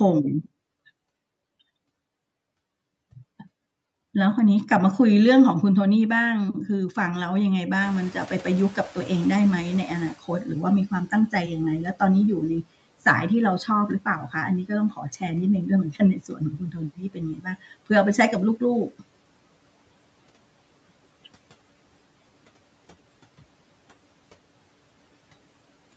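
Speech recorded through call microphone processing, with nothing above 8 kHz. The noise suppressor catching up is the first fault: room noise jumps by about 20 dB at roughly 8 s, and the suppressor's noise estimate lags, so from 7.81 to 11.86 s the noise comes through with less reduction at first before sinking by about 16 dB over those 4.05 s. The second fault is speech cut by the noise suppressor, which mistakes parts of the voice for background. It turns them down at 10.91–11.5 s by up to about 12 dB, at 14.0–15.23 s by up to about 15 dB, and at 15.92–17.62 s by up to about 19 dB. The first two spans lose only brief fragments, while the last loses about a second in total, so syllables there sound swallowed and faint.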